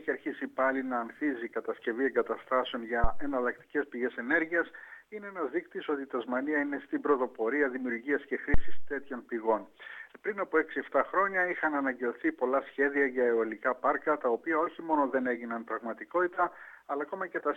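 At 3.04 s and again at 8.54 s a deep thump cuts into the sound. This is a phantom power thump: a supply switched on a live input sends a voltage step through the coupling capacitors. Each thump peaks near about -13 dBFS and about -12 dBFS, then dies away over 81 ms and 103 ms, with tails lasting to 3.40 s and 9.00 s. On a waveform each is a sudden one-sided swing easing back to centre. A spectrogram shows a dark low-frequency smear.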